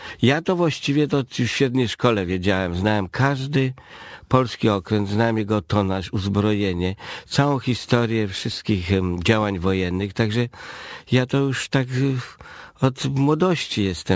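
No technical faults can be heard anywhere in the audio.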